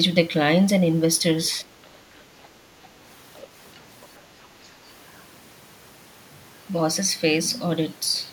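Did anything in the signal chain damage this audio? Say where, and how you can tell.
Yes. Call processing: the other side's voice leaks through as faint scraps at 2.43, 2.84, 3.35, 3.74 and 4.02 s. Likely incomplete echo cancellation.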